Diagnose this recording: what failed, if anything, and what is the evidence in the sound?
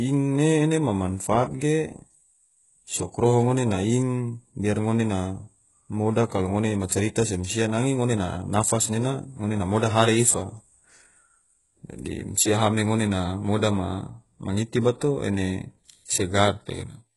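Codec stage, likely HE-AAC compression at a very low bitrate: nothing remains above 11.5 kHz, and replicated treble leaves s sounds gritty and lispy throughout the speech.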